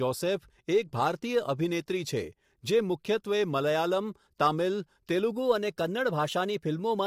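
From the start the speech sounds rough and grainy, with noise filling the gaps between harmonics and a thin top band, likely low-delay AAC compression (AAC-ELD) at around 32 kbps. At 5.33 s the speech suddenly runs 5.6% fast and about 95 cents (nearly a semitone) sharp until the end, consistent with a drift correction step.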